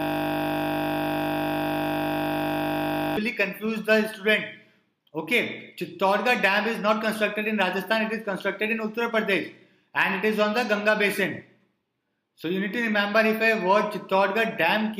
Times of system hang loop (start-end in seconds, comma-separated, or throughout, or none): 0.00-3.17